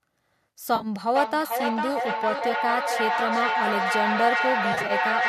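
A short speech recording with two problems. First, AAC frame loss with concealment hits three times. From 0.76 to 0.87 s about 60 ms goes missing, scattered over 80 ms in runs up to roughly 40 ms. Around 2.39 to 2.42 s there's a brief 20 ms gap, and from 4.73 to 4.92 s about 100 ms is lost across 160 ms. Each spot sounds smeared and noisy rather than silent, because the decoder is patching the holes from the last good spectrum. The short, regular gaps fit the roughly 10 ms frames of the likely low-delay AAC coding the call runs on.

Second, from 1.15 s to the end there's feedback echo between two devices. Two devices in the same room are on the call, and one device's microphone re-captures what the other plays out. Neither echo canceller can remove the other device's playback, so everything comes back about every half second, thinner and more ringing, at about the level of the speech itself.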